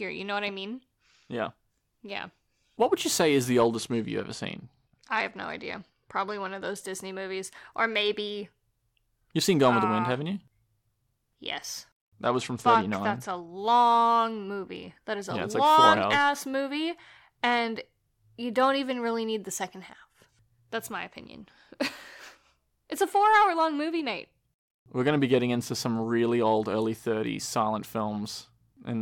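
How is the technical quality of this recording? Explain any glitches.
The recording is speech marred by two stretches of degraded Bluetooth audio, from 3.75 to 6.82 s and from 12.25 to 13.53 s. Both are a Bluetooth SBC bit pool drop. A congested link forced the encoder to spend far fewer bits, consistent with the bit pool falling from 31 to 12, around 88 kbps. The upper sub-bands starve and the rest are coarsely quantised, so treble goes dull and a gritty noise appears. Unlike a dropout, the sound never stops, and it recovers cleanly when the rate returns.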